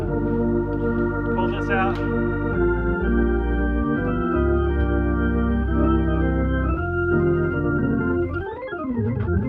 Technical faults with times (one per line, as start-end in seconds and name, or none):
7.57-9.48 time-stretched section